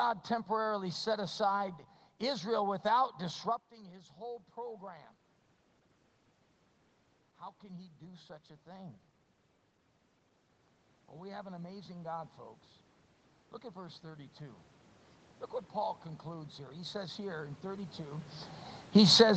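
From 11.13 to 12.38 s, automatic gain rising lifts the level by about 3 dB. The gain control judged the input too quiet and turned itself up slowly. Speech and room noise swell together, so the background grows with the voice. A larger rise follows from 15.72 to 18.34 s, about 6 dB over more than two seconds. Near 18 s the talker also shifts position, which adds a separate level change of its own.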